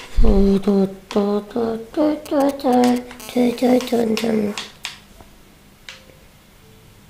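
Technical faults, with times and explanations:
2.26–3.22 s, GSM signalling bursts: a galloping dit-dit-dit of brief raspy buzzes rides over the sound for just under a second, at roughly 15 dB below it. The buzz inside each group repeats at 216.7 Hz, the frame rate of a nearby 2G phone that is only exchanging short control bursts with the network. Something in the audio circuit rectifies those radio pulses, so the phone's on-off keying turns into audible clicks and buzz.
3.22–4.02 s, GSM phone buzz: straight after the bursts, the pattern settles into a continuous hard, raspy buzz at 216.7 Hz, full of harmonics and unrelated to the audio underneath, at about 24 dB below the signal. This is the same phone now transmitting steadily as in a call, sending a burst every frame. The circuit demodulates that regular train into a constant tone for about 0.8 s.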